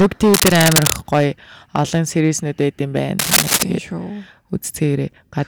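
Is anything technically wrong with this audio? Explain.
Yes, there are two faults. Hard clipping runs throughout: the speech is overdriven by about 21 dB, so peaks are cut flat, heard as harsh crackle, with squared-off waveform tops and high harmonics smeared across the spectrogram. Cable scratch noise appears from 0.34 to 0.98 s, just before "гоё олон", and from 3.19 to 3.63 s. These are dense, uneven rustling bursts somewhat louder than the speech, likely from a worn cable or connector being moved, showing as ragged broadband patches on the spectrogram.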